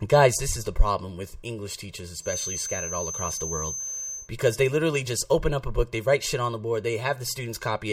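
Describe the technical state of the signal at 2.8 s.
A feedback whistle runs from 2.19 to 4.31 s, ending before "they literally just open": a steady 6.2 kHz tone well below the speech, likely a loop just short of runaway, holding rather than building.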